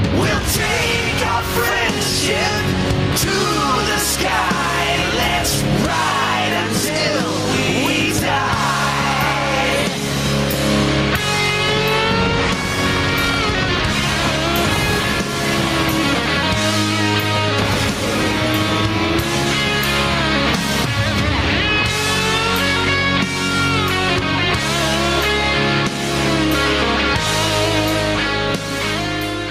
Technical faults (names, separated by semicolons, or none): gain pumping